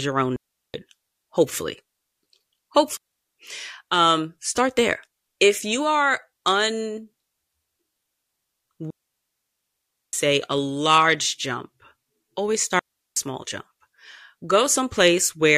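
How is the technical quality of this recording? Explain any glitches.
The quality suffers from four dropouts in this speech. Digital wireless dropouts occur at 0.36, 2.97, 8.90 and 12.79 s, after "your own" and before "a large jump". The receiver lost too much data and muted with a very short fade. Each leaves a clean hole of near silence lasting 0.38, 0.29, 1.23 and 0.37 s, with no noise burst around it.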